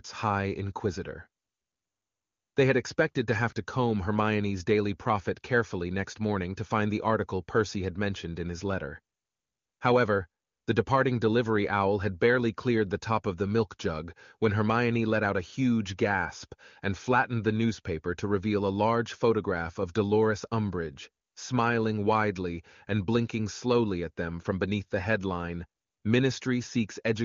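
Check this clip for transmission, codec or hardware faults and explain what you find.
Nothing here points to a problem; the speech comes across over the AMR wideband (HD Voice) codec, and there's nothing in it worth flagging.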